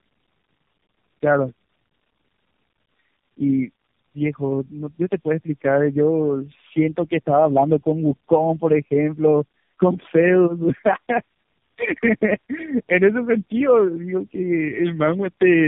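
Tandem speech coding throughout: the speech sounds re-encoded by three speech coders in turn, each compounding the last one's damage. It is rough and warbly, with nothing above 3.5 kHz.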